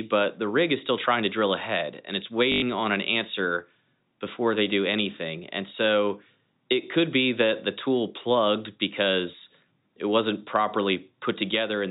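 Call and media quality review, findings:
Packet loss with last packet repeated, 2.52–2.62 s: 100 ms robotic stutter, 50 Hz buzz, consistent with 20 ms packets replayed by receiver concealment; band-limited below 4 kHz, consistent with G.711 telephone coding.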